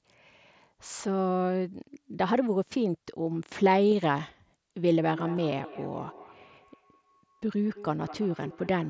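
A speech clip carried over a wideband Bluetooth headset link, with sound reaching up to 8 kHz and a light grainy texture from the mSBC codec. Concealed Bluetooth headset packet loss occurs twice. At 3.91 s a 7.5 ms gap is patched, which fits a single lost frame. At 5.37 s a 15 ms gap fits two lost frames. The receiver fills each gap by repeating the best-matching recent stretch of waveform, so the first is nearly hidden. Feedback echo between two devices starts at 5.11 s and runs to the end. A second device in the room replays the call, and this microphone picks it up again. Each sound returns about a fifth of a second later, at about 17 dB below the speech.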